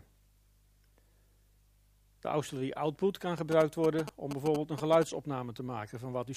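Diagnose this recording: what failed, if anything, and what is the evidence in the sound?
GSM signalling bursts enter at the analogue wiring stage, from 3.38 s to 5.04 s: a galloping cluster of ticks and short buzzes sitting roughly 10 dB below the programme. A nearby 2G phone sending its brief signalling bursts induces RF in the cabling, and a junction in the audio circuit rectifies it into a 217 Hz pulse train. On a spectrogram this shows as a comb of harmonics of 217 Hz reaching into the kHz range. On the waveform it appears as regular spiky pulse groups.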